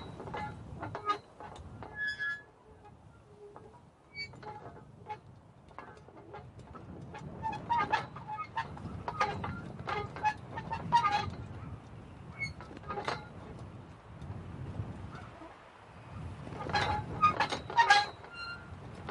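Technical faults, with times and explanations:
0.33 s, compressed frames skipped: a brief smeared blip where the sound lurches forward by about 20 ms. One compressed frame of roughly 23 ms, likely missing or rejected as damaged by the decoder, never played, and the overlap between neighbouring frames blurs the join instead of clicking.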